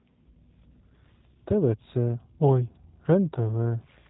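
From start to finish the speech carries G.729 codec damage, and it's plainly audible. There's nothing above about 3.8 kHz, so it sounds boxed-in and phone-like. The roughness comes from the codec rebuilding each short frame from a vocal tract filter, a pitch predictor and a handful of pulses instead of the real waveform, leaving a slightly buzzy, synthetic edge on the voice. That fits an 8 kbit/s G.729A stream.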